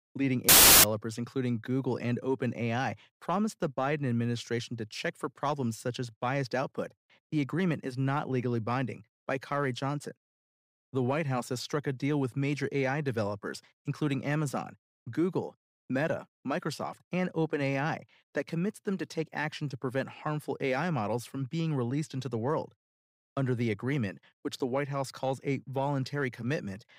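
Speech clip with a wrong sample width burst from 0.49 to 0.84 s: packed 24-bit samples read as 32-bit, so bytes straddle sample boundaries. The result is loud noise with the speech buried beneath it, sped up 1.33 times and raised in pitch. On a waveform this span becomes a dense block. A spectrogram shows broadband noise smeared across all frequencies, with faint upward-shifted speech harmonics underneath.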